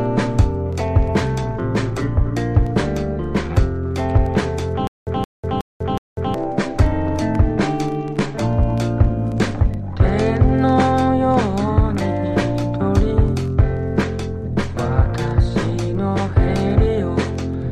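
From 4.87 to 6.34 s comes a stutter with silent gaps: one 171 ms fragment plays four times, each followed by 196 ms of digital silence, likely a stalled stream retrying. Unlike a plain dropout, the same fragment returns. Unlike a seamless loop, dead silence separates the repeats.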